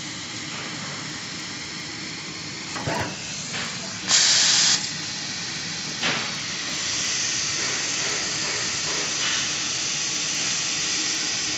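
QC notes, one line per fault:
Throughout, resampler restarted on every block: a steady ticking at 20 per second, one tick every 50 ms, rides on the sound and stops whenever the sound drops out. Each 50 ms stretch was converted with no memory of its neighbours, so the interpolation filter's start and end ran on missing or wrong samples and left a small error at every seam. The sound fits a 16 kHz to 48 kHz upsample.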